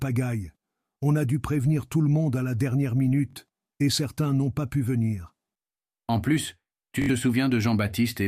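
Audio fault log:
3.31–3.35 s and 7.02–7.10 s, Bluetooth stutter: lost or late packets made the receiver replay its last short slice for about 43 ms, then 64 ms, before sound resumed further on. A repeating slice, not silence, sets it apart from a dropout.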